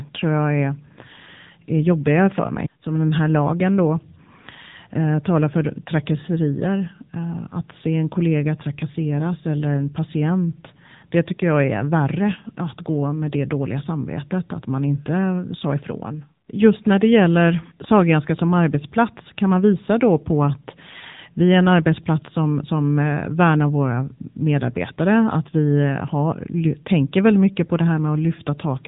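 Throughout the speech, AMR narrowband mobile codec damage is plainly audible. The codec rebuilds the voice from a vocal-tract model driven by sparse pulses, which gives a buzzy, synthetic tone that points to a low rate of about 8 kbps. A spectrogram shows a hard ceiling, with nothing above 3.8 kHz.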